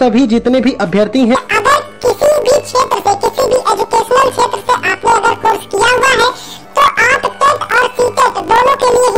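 From 1.35 s to the end, the sound turns into a robotic buzz from planar audio read as interleaved. Each 20 ms block replays at double speed, left then right, producing a 50 Hz block rate. A spectrogram shows vertical striping every 20 ms, and the waveform shows regular joins.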